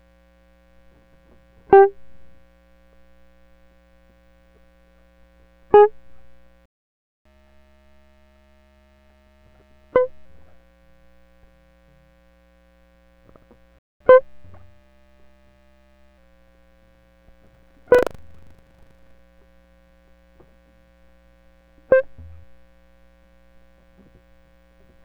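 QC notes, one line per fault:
6.66–7.25 s, playback stall: the music cuts to dead silence for about 0.6 s, likely a data underrun, showing as a flat gap in the waveform.
7.25–10.25 s, catch-up at higher speed: plays back at 1.15× to recover lost time, pitch up roughly two semitones; spectrogram harmonics shift upward, then settle.
13.79–14.00 s, playback stall: a shorter silent dropout of about 0.22 s, likely the same starvation, visible as a brief empty band across all frequencies.
14.00–16.18 s, catch-up at higher speed: runs at 1.1×, pitch raised about one and a half semitones, harmonics drawn slightly higher until normal speed returns.
17.43–19.20 s, buffer tearing: a robotic 25 Hz rattle as writer and reader cross, splicing in a small slice of audio from about 70 ms earlier; waveform shows regular hard discontinuities, spectrogram vertical striping at 25 Hz.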